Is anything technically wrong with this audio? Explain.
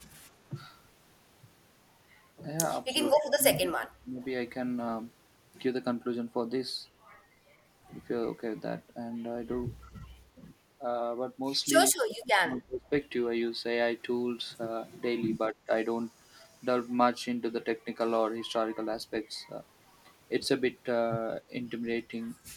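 Yes. The speech dips in level five times: shallowly at 0.50–0.54 s and 2.88–2.94 s, heavily from 3.13 to 4.21 s and from 11.98 to 12.92 s, where it falls by roughly 30 to 35 dB and nearly vanishes, and lightly again at 15.49–15.71 s. This is likely speech suppressed in double talk. With both ends talking at once, the echo canceller couldn't tell this talker from loudspeaker echo and turned the whole signal down.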